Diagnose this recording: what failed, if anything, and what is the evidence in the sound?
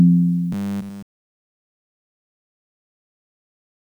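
Robotic sound from repeated short buffers, 0.52 to 1.16 s: a rigid 100 Hz buzz throughout, likely a driver-stage underrun looping a 10 ms block.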